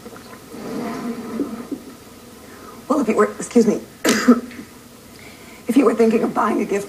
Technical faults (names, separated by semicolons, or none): cable scratch noise